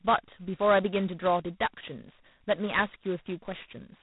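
From start to finish the speech carries heavy G.726 ADPCM damage. The codec sends only a few bits per sample describing the gap between the signal and an adaptive prediction. With so coarse a step, quantisation noise rises sharply and tracks the speech level, giving a harsh, rasping hiss that swells on louder syllables. The coarseness fits the 16 kbit/s mode. Nothing passes above about 3.9 kHz, so the top end sounds dull and telephone-narrow.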